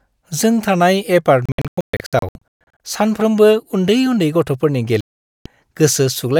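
A digital broadcast dropout hits twice: the receiver lost clean frames and muted until good ones returned. From 1.46 to 2.80 s the speech breaks into short holes totalling 800 ms, the longest 128 ms; from 5.01 to 5.46 s it falls silent almost throughout.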